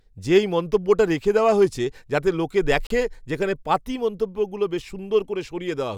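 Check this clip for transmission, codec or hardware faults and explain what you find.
One fault is present. At 2.87 s to 2.90 s there is a block of digital silence, about 35 ms long. The sound cuts out and returns with no fade. This is most likely because the output buffer was not filled in time. The result is a short hole in the speech.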